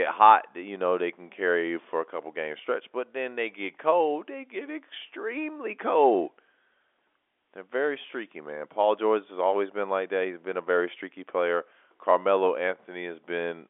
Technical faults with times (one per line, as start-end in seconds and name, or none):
none